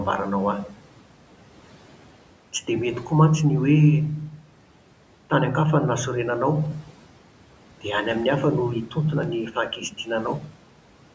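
Speech cut by the noise suppressor, 9.52 to 10.08 s, in this call-processed speech recording: the suppressor mistook soft speech for noise and pulled it down about 9 dB with the background. Roughly 150 ms in total sounds swallowed and faint.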